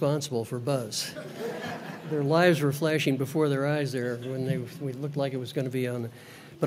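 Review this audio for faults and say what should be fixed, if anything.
Nothing to fix; no faults are audible anywhere in the clip.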